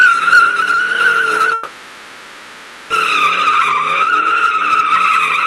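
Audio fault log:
1.53–2.94 s, long network dropout: the sound turns into a fading buzzy or hissy smear of its last moment for about 1.4 s, never reaching silence, then resumes with 0.86 s missing and timing shifted about half a second, likely from packets ceasing to arrive.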